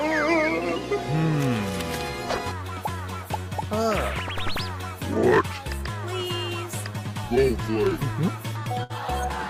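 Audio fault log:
8.83 to 8.93 s, burst of packet loss. A short run of audio never reached the player in time. About 60 ms of sound is simply gone. To cover the hole, the receiver stretched the last sound it had for about 61 ms and let it fade, so the sound holds briefly and sinks instead of stopping. It then jumps ahead to where the sound resumes, with the piece in between missing.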